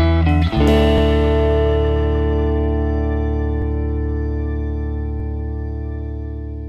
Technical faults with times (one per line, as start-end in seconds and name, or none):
0.98-1.00 repeated buffer
3.62-3.64 repeated buffer
5.20 repeated buffer